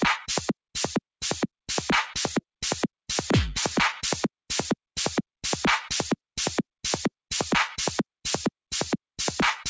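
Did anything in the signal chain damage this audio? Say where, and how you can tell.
No, nothing in the chain stood out as damaging this sound on listening, with the call path audibly limited to nothing above 8 kHz, which fits a G.722 wideband link.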